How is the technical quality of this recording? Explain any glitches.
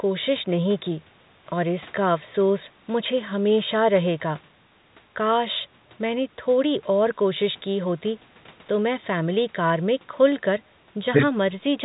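There are no glitches to explain: the speech has the narrow band of an ordinary phone line, with nothing above about 3.9 kHz, as expected from G.711 A-law telephone coding at 64 kbps, and the call microphone processing has trimmed only the lowest bass, as it normally does.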